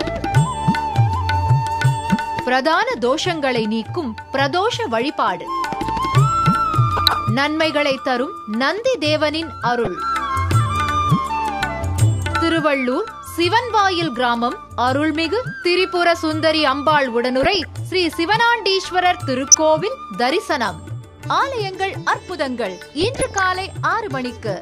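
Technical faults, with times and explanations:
6.97–7.21 s, 9.85–9.87 s, 17.43–17.66 s, 19.48–19.55 s and 22.82–23.46 s, DAB burbling: short noise blips in single sub-bands sit over the sound. Weak reception lets bit errors, up to about half a percent, slip past error correction. Corrupted samples put short blips of noise in single sub-bands, and corrupted scale factors make sub-bands jump in level for up to a frame. The longest burst is the last one.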